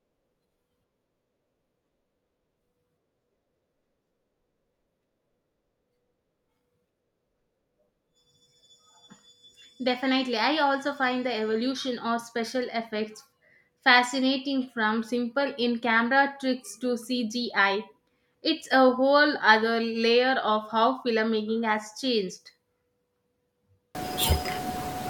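A wrong sample width fault runs from 23.95 s to the end of the clip. The samples were stored as 16-bit integers but are read back as packed 24-bit integers, so each decoded value borrows bytes from neighbouring samples. Only some keep the true signal's upper bits. The result is a loud, harsh noise bed with the speech buried underneath, playing 1.5 times too fast and raised in pitch to match.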